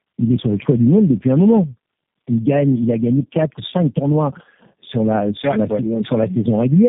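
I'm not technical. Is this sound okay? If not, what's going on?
No. The speech has tandem speech coding throughout: three phone coders in a row each re-squeezed the last one's damage, leaving it rough, muffled and warbly, with nothing above 3.7 kHz.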